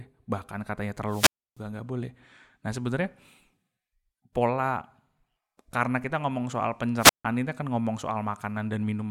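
At 1.07 s, after "bahkan katanya", a wireless microphone squelch dropout hits the speech. Hiss swells briefly, then the output goes almost silent for about 300 ms. The radio link has faded, and the receiver's squelch has shut the audio off. Speech returns by 1.59 s. A second dropout runs from 6.96 to 7.25 s, after "karena kita ngomong soal". Its mute is shorter, about 154 ms. Speech resumes with "ini kan ngomong".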